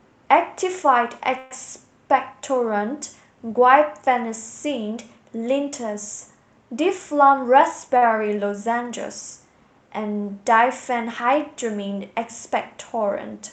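A speech recording sent over an Opus call path, with content above about 8 kHz cut off. At 1.38 to 1.52 s a call audio freeze holds the sound as a fading buzz for about 123 ms, likely from delayed packets emptying the jitter buffer. The spectrogram shows smeared, flat bands rather than gaps. From 6.72 to 7.88 s a jitter buffer speed-up plays the speech at 108% speed with unchanged pitch, trimming pitch periods totalling about a tenth of a second. At 7.97 to 8.03 s a short stall from a late packet stretches the current sound by 45 ms, visible as a briefly held stretch of the waveform.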